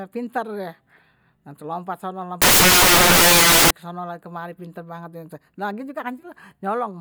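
From 2.42 to 3.71 s the speech turns into loud hiss: samples built from the wrong bytes, the low-order byte now dominating each value. The waveform fills densely, and the spectrogram shows flat broadband noise.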